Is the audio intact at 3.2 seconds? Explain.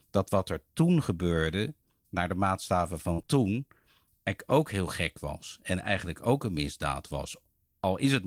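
No. Right after "gebeurde naar de maatstaven", a burst of packet loss from 3.13 to 3.20 s is bridged by about 47 ms of continued, fading sound, and about 40 ms are skipped. On a spectrogram this shows as a smeared, decaying patch.

In the last 20 ms of that span (3.18 to 3.20 s), a lost packet was rebuilt from error correction. It is a rough, noisier low-bitrate copy, visible as grainier texture.

Two short concealed packet losses follow at 3.22 to 3.25 s and 3.25 to 3.30 s. Each is filled by extrapolating the previous sound, which gives a brief smear or wobble and breaks the waveform's normal detail.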